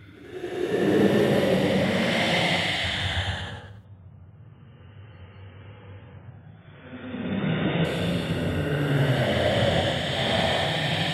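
An adaptive stream at a lower bitrate runs from 3.85 s to 7.85 s in this recording of sounds. For those four seconds the player evidently fell back to a much leaner encoding after the connection slowed, and the quality drops abruptly without any gap. Nothing above 3.8 kHz survives in that stretch, and compression artefacts rise. The sound points to an MP3 stream stepping down from about 128 kbit/s to about 16 kbit/s before switching back up at 7.85 s.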